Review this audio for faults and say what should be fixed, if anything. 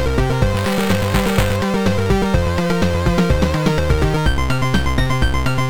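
A robotic 345 Hz buzz runs from 0.57 to 1.56 s. This is buffer tearing, where writer and reader cross inside every period, consistent with a 128-sample buffer. Keep the write position safely ahead of the hardware read pointer, and resync them after any slip, so the two never cross.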